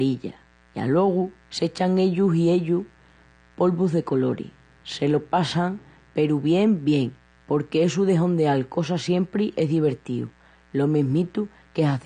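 A steady, raspy buzz sits under the speech from start to finish, well below it at roughly 35 dB down. It is mains buzz on a 60 Hz supply: something like a dimmer, a rectifier or an unshielded lead lets sharp switching spikes into the signal twice per cycle. The resulting stack of 60 Hz harmonics climbs into the kilohertz range, giving the hum its gritty edge.

Throughout the clip the speech also sounds dull and smeared, with nothing at all above 10 kHz and a plainly audible warbling, fizzy texture on held sounds and sibilants. The likely cause is AAC compression, AAC-LC at a low rate that fits about 32 kbps. To save bits, the encoder pulled its cut-off down to 10 kHz, left gaps in the spectrum and approximated some bands coarsely, which produces the swirling artefacts.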